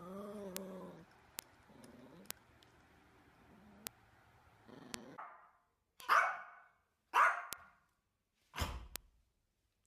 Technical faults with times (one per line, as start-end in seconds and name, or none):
0.57 bit error spike
1.39 bit error spike
2.31 bit error spike
3.87 bit error spike
4.94 bit error spike
6.00 bit error spike
7.53 bit error spike
8.96 bit error spike